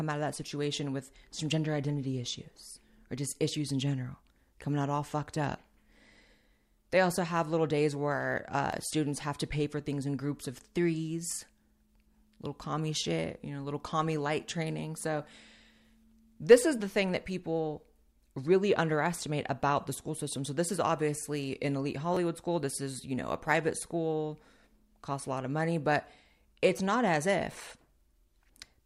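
A repeated buffer at 8.72 s, after "have little days where", and at 22.14 to 22.17 s, after "is obviously an elite", replays a piece of roughly 11 ms (fitting a 512-sample buffer) once and then twice because new audio arrived late. Each is heard as a click or brief buzz, made of identical copies with hard joins rather than the silent gap of a dropout.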